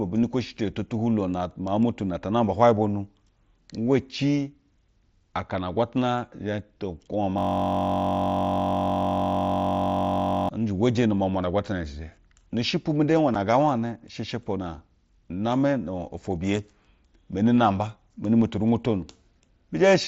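At 7.38 s, just after "to kwube wa", a system hang loop begins: the computer stalled while the audio hardware kept replaying one 21.33 ms stretch of its ring buffer, which fits a 1024-sample buffer. Until 10.49 s, the speech turns into a steady buzz at 46.9 Hz.

At 13.35 s, between "shepwu mu de hwayo" and "ngaa wane she she", unconcealed Bluetooth headset packet loss drops a 7.5 ms piece of speech. No filler was put in its place, so there is a brief, abrupt hole that can click at its edges.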